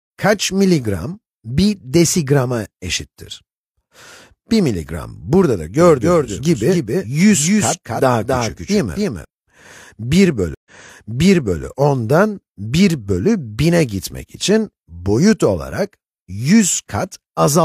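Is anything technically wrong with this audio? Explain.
Yes, there are two faults.

From 5.81 to 9.25 s there is a doubled audio track. A second copy of the same audio plays around 300 ms behind the first, about 5 dB quieter. It is likely caused by the sound being captured again through a slower path, or by an edit that left two out-of-step copies. The copy is full-band and dry, with no decay or room colour. It starts and stops abruptly, so the sound seems to stutter against itself.

From 10.55 to 11.63 s there is a stream reconnect. The connection dropped and the player went silent for 110 ms. It then reconnected and started a fresh decoder. The server resent a burst of audio, so playback resumes 975 ms earlier than where it broke off. The listener hears a short gap, then almost a second of sound repeated.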